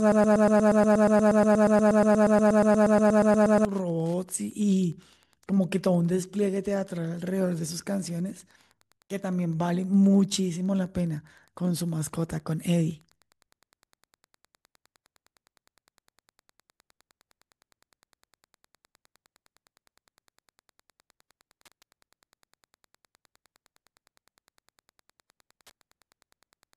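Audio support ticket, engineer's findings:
Broken-record loop, 0.0 to 3.65 s: a 119 ms fragment repeating back to back, about 30 times, already looping when the clip opens. Likely a stalled player or stream resending its last buffer. The original audio for that stretch is gone.

Wi-Fi interference, whole clip: steady faint ticking about ten times a second, matching a 102.4 ms beacon, sitting roughly 40 dB under the speech. A nearby radio's bursts are getting rectified in the audio circuitry. Worth checking router or dongle placement and shielding.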